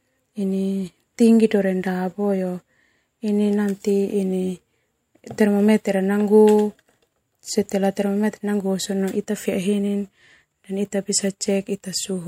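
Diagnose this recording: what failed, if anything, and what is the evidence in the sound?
Nothing failed here; the speech holds together all the way, and no stage of the chain leaves any trace in the sound.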